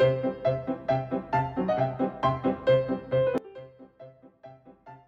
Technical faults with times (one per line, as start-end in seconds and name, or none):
3.38-5.08 sudden gain jump